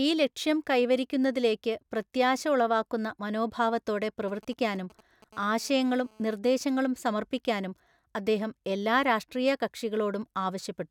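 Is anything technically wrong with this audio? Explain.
Yes, two kinds of GSM interference. From 4.05 to 5.24 s, GSM signalling bursts appear. A nearby 2G phone sends short radio bursts, and the audio circuit rectifies them. This gives a galloping dit-dit-dit of short 217 Hz buzzes, roughly 25 dB below the speech.

From 5.33 to 6.24 s comes a GSM phone buzz. The phone is now transmitting steadily, bursting 217 times a second, as in a call. The result is a hard, raspy 217 Hz buzz, about 31 dB below the speech.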